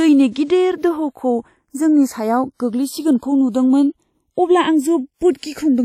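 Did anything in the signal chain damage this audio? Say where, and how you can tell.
Yes: the channels are drifting apart at the converter stage, two devices on separate clocks roughly 70 ppm off, so the inter-channel delay creeps toward roughly 0.4 ms. Summed to mono, that produces slow flanging across the whole speech clip.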